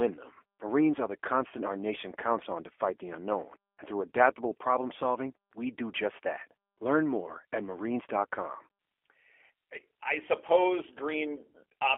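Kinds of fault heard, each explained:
G.729 codec: Speech is rebuilt from a vocal tract model and sparse pulses. It sounds plainly rough and synthetic, confined to 300 Hz to 3.4 kHz, fitting 8 kbit/s.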